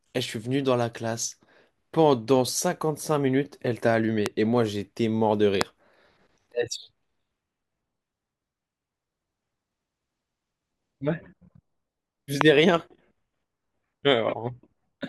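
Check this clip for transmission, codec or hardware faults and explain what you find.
Three loud pops occur, at 4.26 s, 5.61 s and 12.41 s. Each is a single sharp crack lasting about 20 ms and standing roughly 20 to 25 dB above the speech, which continues underneath. They are likely from a voltage spike, such as a switch, static or a driver glitch, entering the signal chain.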